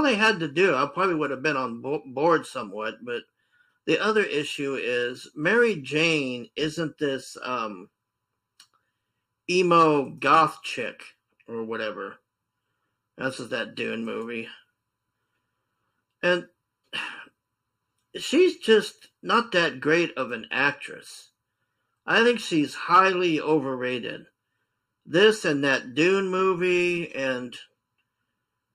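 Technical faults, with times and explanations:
Throughout: channel delay (comb filtering). One channel lags under a millisecond before mono summing, cutting evenly spaced notches from around 700 Hz, so the sound turns hollow.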